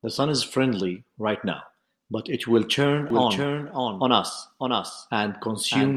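A doubled audio track appears in this speech clip from 3.10 s to the end. A second full-band copy, roughly 5 dB quieter, trails about 0.7 s behind with no decay, likely from a slower duplicate capture path.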